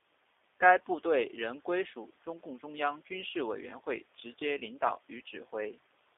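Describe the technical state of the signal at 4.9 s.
At 4.9 s the signal is in a stretch of VoIP packet loss concealed by the speech codec, running from about 4.87 to 4.92 s, just after "会直接领". Roughly 20 ms of audio went missing, which fits two lost 10 ms frames. The decoder filled the hole by extending its last pitch period and vocal tract filter at falling gain. The result is a short buzzy or noisy, smeared continuation that fades, then a weak or distorted onset as the predictor recovers. Unlike a plain dropout, there is no hard silence or click, only this synthetic tail.

Beneath that, the whole line runs through the G.729 codec at 8 kbit/s, with the band held to roughly 300 Hz to 3.6 kHz. The codec models the voice as a filter excited by a pitch predictor and a few pulses per subframe, which gives the plainly audible rough, slightly synthetic timbre. That damage is steady across the clip, not a momentary event, which separates it from the brief concealment artefact at this moment.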